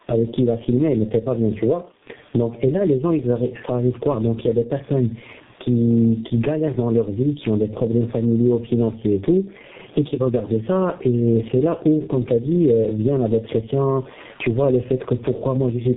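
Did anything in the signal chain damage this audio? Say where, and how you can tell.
Yes, in two places. The first is call processing, where there is gain pumping throughout the clip. The room noise sits about 42 dB below the speech, and the gain swings by around 20 dB. The likely cause is input gain set far too high, with a fast limiter clawing it back on each loud syllable. Because the gain itself moves with the level of the sound, this is pumping rather than a noisy room, which would stay at a constant level.

The second is the codec path, where there is tandem speech coding across the whole clip. Nothing reaches above 3.8 kHz, and the speech is rough, muffled and warbly, more degraded than a single low-rate coder would leave it. That points to the call being decoded and re-encoded several times, apparently three speech codecs in a row, ending in something that fits G.723.1 at 6.3 kbit/s. 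Each stage compounds the previous stage's errors. A single bad codec or a lossy network wouldn't produce this layered, uniform degradation without dropouts.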